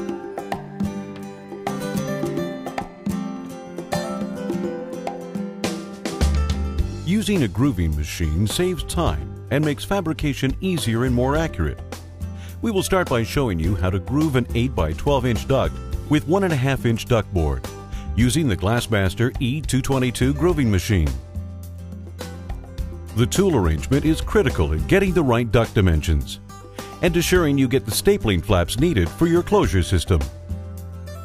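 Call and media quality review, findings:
No defects found in the signal chain: level, continuity and timing stay stable throughout, with nothing needing a ticket.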